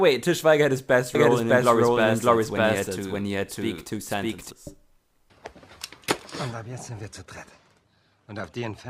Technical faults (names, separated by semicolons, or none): doubled audio track